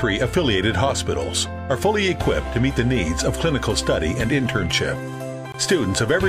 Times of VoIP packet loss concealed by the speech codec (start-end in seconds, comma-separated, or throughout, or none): none